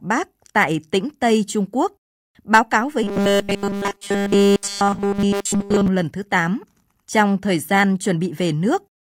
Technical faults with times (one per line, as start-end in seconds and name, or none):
3.03-5.88 robotic sound from repeated short buffers